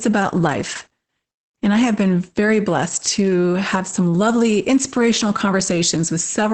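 Heavy Opus voice compression runs through the whole speech clip. Nothing survives above about 8.6 kHz, and the coarse linear-prediction excitation leaves the speech muffled, hoarse and slightly robotic. This fits SILK-only wideband coding at roughly 10 kbps with 20 ms frames.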